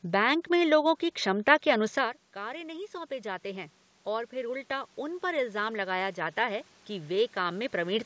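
Around 2 s the talker drops back from the mic, so the level falls by about 16 dB, and from 2.34 s to 8.01 s you can hear the automatic gain rising to chase it. The AGC decides the input has gone too quiet and slowly winds its gain up, about 9 dB in total, so the voice and the room noise swell together over several seconds rather than snapping back. It never fully recovers the lost level.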